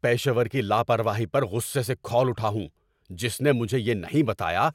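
Speech, with no technical fault to be heard anywhere in the clip. Nothing in the audio points to a problem in how it was captured, processed or delivered.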